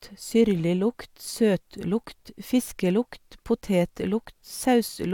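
Speech recording, no technical faults audible anywhere in the clip.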